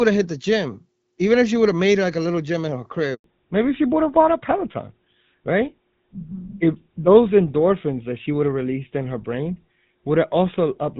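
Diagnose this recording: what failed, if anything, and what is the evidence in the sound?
Network stage. A handover gap opens at 3.14 s, right after "little gym in her". The speech cuts off abruptly and stays silent for 100 ms, until 3.24 s. The call was switching networks, and no speech frames arrived during the move. That stretch is lost.

Codec stage. From 3.24 s to the end, the speech carries nothing above 4 kHz. Before the gap it had the lightly coded wideband sound of AMR wideband (HD Voice). This is a fallback to narrowband. The new link uses an older codec, consistent with GSM full rate, so the speech turns duller and rougher.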